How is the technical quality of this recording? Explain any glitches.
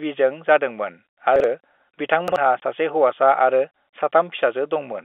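The quality is held back by two brief jumbled moments and one short dropout, all on a telephone-band line where G.711 coding limits the sound to roughly 300 Hz to 3.5 kHz, with little or no added coding noise.

Chunks out of order, at 1.36–1.44 s and again at 2.28–2.36 s: a 40 ms slice of audio turned up one slot late and played after the slice that should have followed it. Nothing's missing, but the swap leaves hard joins, so each spot sounds like a quick scrambled stutter.

Packet loss filled with silence, at 2.60–2.62 s: a 20 ms stretch went missing, which fits a single lost packet, and the receiver just played silence there. You hear a tiny hole in the sound with sharp edges.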